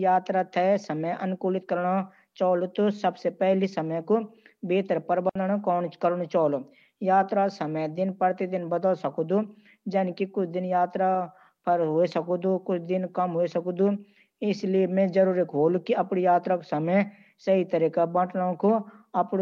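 Speech with a digital wireless dropout from 5.29 to 5.35 s: the receiver lost too much of the link and muted for 60 ms, leaving a clean hole with no noise burst either side. On a waveform it shows as a flat gap; on a spectrogram, a narrow vertical blank band.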